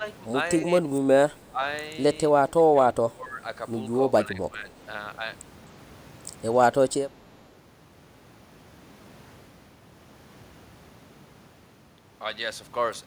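The speech dips and partly drops out at 0 to 0.04, 0.65 to 0.92, 1.31 to 1.61, 2.29 to 2.9, 3.08 to 3.41 and 4.25 to 4.67 s, from a slight dip to about 20 dB. This is speech suppressed in double talk: the echo canceller likely could not separate this talker from the loudspeaker echo of simultaneous far-end talk and turned both down.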